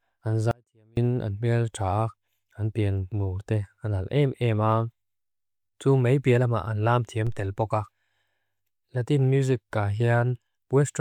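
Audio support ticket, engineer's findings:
Signal path lost the wanted feed, with downstream stages still live; likely an upstream link or source interruption. Audio dropout to a faint residue, 0.51 to 0.97 s: speech cuts out abruptly for about 460 ms, leaving only a faint residue around 35 dB down.

Converter or input offset switched in, producing a DC step at 7.27 s, between "lama an lam thiam" and "tel pokak". Zero line jumps, then bleeds off through a 2 Hz high-pass. Heard as a low thump or click under continuing speech.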